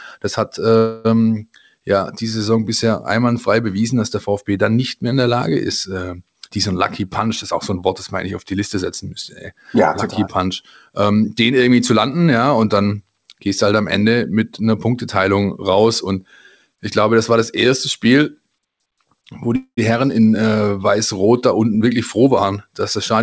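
From 0.78 to 1.07 s there is a call audio freeze, likely from packets held up in transit. The last sound is stretched into a fading buzz for about 270 ms. The speech then resumes exactly where it stopped, so this is an inserted gap rather than a dropout.

A jitter buffer speed-up follows from 6.36 to 7.83 s, right after "ist äh". Roughly 200 ms of pitch-period slices are trimmed, and the speech runs at 111% with unchanged pitch. That unchanged pitch is what separates it from a tape-style speed change.

A milder speed-up at 105% runs from 10.44 to 11.51 s, just before "irgendwie zu landen ja".

A second freeze at 19.56 to 19.79 s fills 211 ms, and about 80 ms of it fades fully to silence.

A final hurried stretch runs from 21.60 to 23.14 s at 108%.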